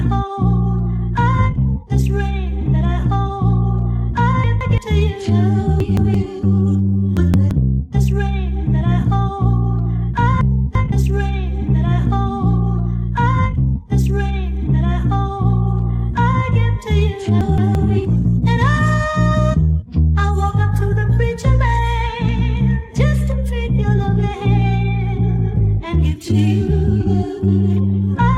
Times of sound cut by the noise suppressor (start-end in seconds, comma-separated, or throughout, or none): none